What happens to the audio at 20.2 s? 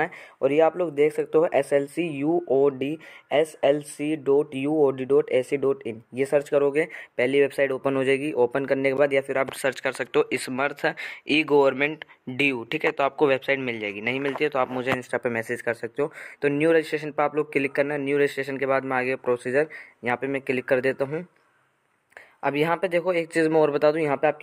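Nothing goes wrong at 20.2 s; the audio plays through that moment intact, with no dropout, click or distortion.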